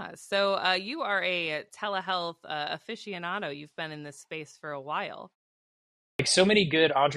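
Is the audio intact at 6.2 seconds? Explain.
No. A clipped start after a pause runs from 6.13 to 6.19 s, just before 6.2 s. After about 0.86 s of silence, the output device appears to have gone idle and needed time to wake and lock again, so roughly 63 ms of the returning speech never reached the output. The speech therefore resumes abruptly out of silence with its opening sounds missing, and the onset lands hard instead of building naturally.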